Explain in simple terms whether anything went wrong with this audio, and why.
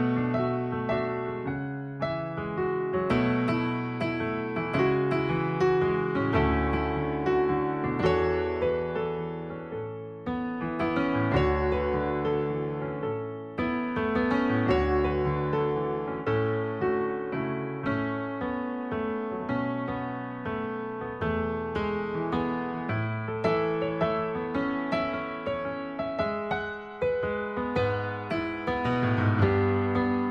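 Nothing went wrong with this audio.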